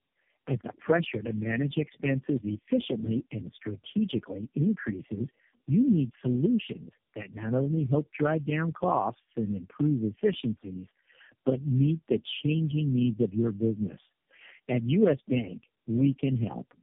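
Throughout the speech, tandem speech coding is audible: the sound points to four low-rate speech coders in a row (AMR-NB and G.729A, joined by G.711 links), each re-coding the last one's damage. Nothing passes above 3.6 kHz. Unlike a single narrowband codec, the muffling, roughness and warble are compounded.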